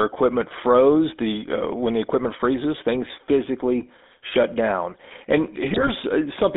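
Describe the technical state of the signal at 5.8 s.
GSM bit errors run from 5.71 s to 5.90 s, right across the 5.8 s point. Corrupted bits reached the decoder there, so some frames were rebuilt from wrong filter, pitch or gain values. The spectral shape bends and the level jumps from frame to frame, and the speech breaks into squawks, pops and gargling for just under 0.2 s. That span points to roughly nine damaged 20 ms frames, which fits an error rate near 2%.

Underneath those errors, and present for the whole clip, is the GSM full-rate codec. It models the vocal tract and drives it with a sparse pulse excitation that keeps only every third sample, which fits the 13 kbit/s full-rate coder. The result is a plainly audible buzzy, gravelly roughness. The line band runs from 250 Hz to 3.6 kHz, so the speech has no low body and nothing above that upper limit.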